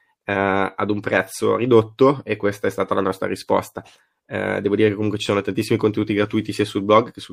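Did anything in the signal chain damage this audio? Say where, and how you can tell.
Yes, at the codec stage, likely low-bitrate MP3 compression, around 64 kbps, throughout: weak frequency lines drop in and out, giving watery, swirly speech with a dulled top end.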